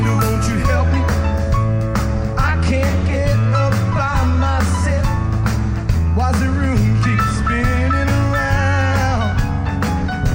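From 0.64 s on, channel delay (comb filtering): a two-sample lag cancels the mono sum near 10 kHz, leaving a fixed notch that dulls the treble, unlike a smooth low-pass roll-off.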